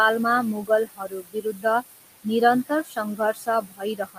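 A noise suppressor running over this short speech clip is pulling the steady background down by about 18 dB, frame by frame, and those noise suppressor artifacts are audible throughout: the room noise, which sits about 11 dB under the voice, dips in the gaps and swells back beneath the speech. The suppressor also mistakes real speech for noise, giving speech cut by the noise suppressor in three stretches. From 0.62 to 1.65 s, parts totalling around 0.7 s are turned down by as much as about 21 dB. From 2.68 to 2.98 s, roughly 0.15 s drops by up to about 16 dB. From 3.16 s to the end, the cut reaches about 21 dB. In these stretches, softer consonants and word endings sound swallowed or faint.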